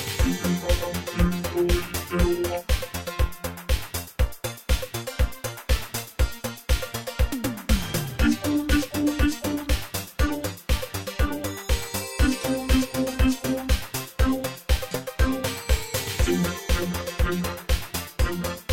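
No technical faults are audible anywhere in the audio.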